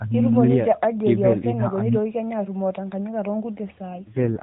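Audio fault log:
3.90 to 4.42 s, AMR rate drop: the mobile link appears to have weakened and the network switched the codec to a much lower mode, spending fewer bits on the voice and more on error protection. From 3.90 s to the end the speech turns rougher, buzzier and more synthetic, which fits a step down from roughly 12.2 to 4.75 kbps. The narrowband AMR-NB sound holds steady before this point. The band doesn't change and there is no gap, only coarser voice modelling.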